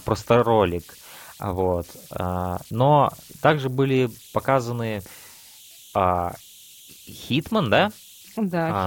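Throughout the speech there are converter idle tones. An undithered delta-sigma converter slips into repeating bit patterns at low signal levels. Here that produces a faint whistle around 3 kHz, about 27 dB below the speech, which a spectrogram shows as a thin horizontal line along the whole clip.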